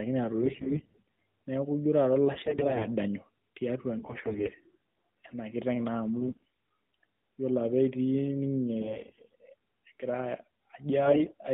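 Narrowband mobile speech with AMR bit errors at 0.42–1.11, 2.34–2.87, 3.98–4.55, 6.20–6.43, 8.80–9.35 and 11.06–11.34 s. Corrupted frame bits scramble the excitation pulses and fine parameters, so the voice turns hoarse and gargly, heaviest in the first burst. On a spectrogram the harmonics smear into noisy fuzz within the 150 Hz to 3.7 kHz band.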